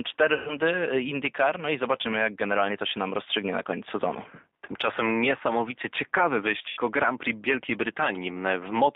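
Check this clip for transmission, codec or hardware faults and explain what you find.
Two faults are present: plainly audible speech-codec coding across the whole clip, and two short dropouts patched over by that codec.

Throughout, the speech passes through the G.729 codec at 8 kbit/s, rebuilding it from a vocal-tract filter and sparse pulse excitation. The line band runs only from about 250 Hz to 3.7 kHz, so the voice sounds thin and boxy, with a plainly audible rough, synthetic edge.

VoIP packet loss concealed by the speech codec occurs at 0.34–0.56 s and again at 6.69–6.80 s, just after "niesamowicie ciekawy". The decoder, missing about 130 ms and then 80 ms of data, extends its last pitch and filter at falling gain. The voice smears and fades, then returns weak before recovering.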